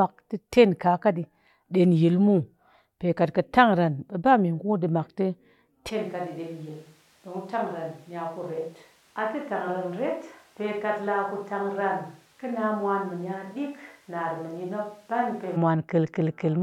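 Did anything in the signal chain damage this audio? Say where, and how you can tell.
Yes. From 5.91 s to 15.55 s the speech abruptly turns roomy and hollow, thinner in the bass, about 10 dB quieter, with noise near 30 dB down. This is a switch to a distant microphone at capture, likely a failed close mic. Room reverberation, not mere EQ or gain, sets it apart.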